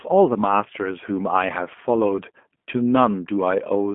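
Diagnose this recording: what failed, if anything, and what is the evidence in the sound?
The failure is at the codec stage: a G.729 codec, audible for the whole recording. Nothing remains above 3.5 kHz, and the band sits near 200 Hz to 3.4 kHz. The speech sounds rough and synthetic. The coder rebuilds it from a filter, pitch and sparse pulses, which fits an 8 kbit/s coder.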